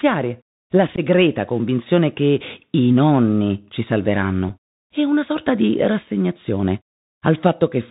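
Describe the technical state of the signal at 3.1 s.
At 3.1 s the speech is passing through a Bluetooth CVSD headset codec, as it does across the whole clip. Each sample is coded as a single up-or-down step with an adaptive step size, at a rate that fits a 64 kbps link. Nothing above 4 kHz survives, so the sound is plainly narrowband. Loud high sounds outrun the step and distort, s sounds turn scratchy, and a granular hiss sits under the speech.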